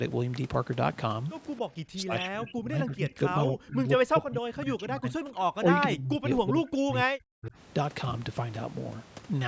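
Speech suppressed in double talk runs from 1.92 to 5.42 s and from 5.63 to 7.55 s. The speech dips, falling by up to roughly 40 dB. The likely cause is an echo canceller that treated overlapping talk as echo and turned everything down.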